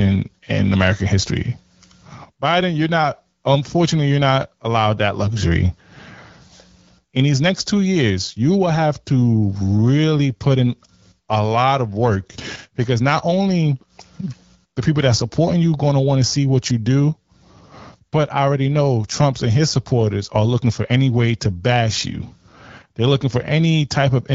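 No technical faults occur in this speech recording, which is carried over an AMR wideband (HD Voice) link at 12.65 kbit/s.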